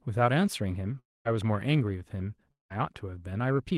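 At 0.99 s the speech breaks off until 1.27 s. The last sound is stretched into a fading buzz, then near silence. About 260 ms of speech never returns; it resumes further on. At 2.51 s the same thing happens, lasting to 2.72 s, with about 200 ms lost. This is likely a long network dropout. Packets stopped arriving, the receiver smeared out what it had, and then it ran dry.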